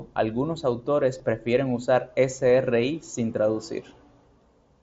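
At 1.18 s there is a brief concealed Bluetooth headset packet loss. Voice packets between headset and phone went missing, about 15 ms of audio, which fits two dropped frames. The receiver filled the gap by repeating the closest-matching stretch of the waveform just before it. Because two frames in a row were lost, the patch is not fully hidden. It shows as a short buzzy tone held at full level and a slight warble as the real signal resumes, heard through the band-limited mSBC headset codec.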